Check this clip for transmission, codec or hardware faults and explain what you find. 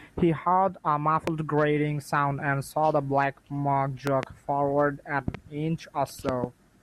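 The clip has one hardware fault, loud pops, at four points in the speech. A sudden voltage step or pulse, likely from a connector, switch, static discharge or driver glitch, is added to the signal, and the following stages shape it into a brief transient. The result is a sharp pop: a single one at 1.27–1.30 s, and double pops at 4.07–4.26 s, 5.28–5.37 s and 6.29–6.46 s. They peak around 15 dB above the speech, and about 10 dB at 5.28 s, while the speech continues underneath.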